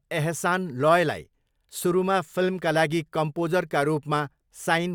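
No technical faults can be heard anywhere here.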